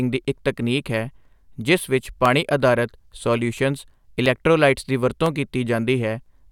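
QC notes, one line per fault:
0.25–6.26 s: periodic USB or driver dropouts, about a millisecond of sound lost to silence every 1.0 s, heard as regular ticks where the driver briefly stalls.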